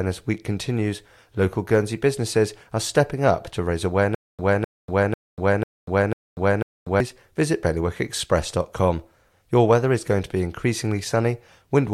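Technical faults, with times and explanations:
4.15 to 7.00 s, stutter with silent gaps: After "stepping up to raise", a 255 ms fragment of speech repeats six times. Each repeat is followed by 240 ms of digital silence. The stream likely stalled and replayed its last fragment at each retry. The intended audio is lost.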